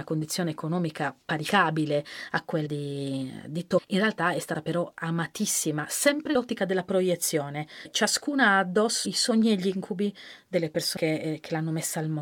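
Compressed frames are skipped at 1.48, 2.65, 3.77–3.79, 6.34, 7.84–7.86, 9.05 and 10.96 s, first just after "condizione economica". Whole frames never play, so the speech jumps ahead by roughly a tenth to half a second.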